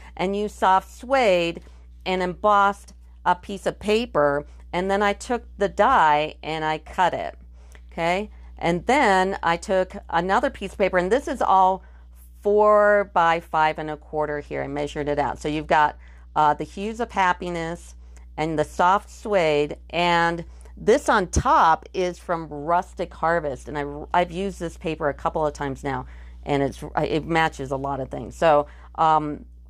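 From 14.27 s to 18.06 s there is a Bluetooth SBC bit pool drop. A congested link forced the encoder onto a smaller bit budget, which fits the bit pool halving to 14. Treble dulls and gritty quantisation noise rises until recovery.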